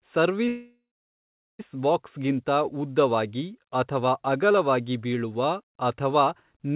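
At 0.48 s a call audio freeze begins and lasts until 1.61 s. The last sound trails off as a fading buzz or hiss, then about 0.8 s of silence. Speech resumes at "ಬಾಕ್ಸ್ಗಿಂತ ಉದ್ದವಾಗಿ ಅಥವಾ ಅಗಲವಾಗಿ" with nothing lost. The likely cause is delayed packets draining the jitter buffer, which inserted a 1.1 s gap.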